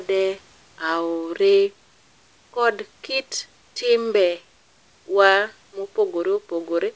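No faults in this speech recording: the WebRTC call path shows nothing above 8 kHz, which fits G.722 at 64 kbps, and the room noise sits about 40 dB below the speech.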